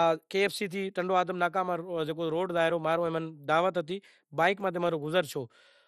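Speech, and the whole clip carries plainly audible MP2 compression damage, likely from a low-rate Layer II encode, which fits about 64 kbps. Nothing survives above 14.3 kHz, so it's dull, and the remaining sub-bands flicker and sound coarsely quantised, leaving a gurgly, grainy edge.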